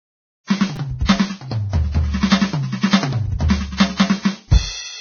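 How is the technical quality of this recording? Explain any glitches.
The recording has two technical problems: heavy, band-limited codec damage throughout the music, and one very short stutter near the start.

Vorbis compression affects the whole clip. Nothing is present above 6.5 kHz, and the remaining treble sounds hissy and grainy, with roughened tones and smeared attacks. The likely cause is low-quality Vorbis encoding, which matches a very low bitrate: fine spectral detail was quantised so coarsely that it became noise of similar energy. On a spectrogram, the content stops at a flat ceiling at 6.5 kHz, and the upper bands look speckled and blotchy instead of showing clean harmonics.

A repeated buffer occurs at 0.76 s. Fresh audio did not reach the device in time, so it replayed its last chunk, and the same tiny slice sounds three times in a row. That slice lasts about 5 ms, which fits a buffer of that size. 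About 10 ms of music is lost, and the result is a brief click or buzz. On the waveform, you would see an identical short segment tiled back to back, with abrupt discontinuities at each join.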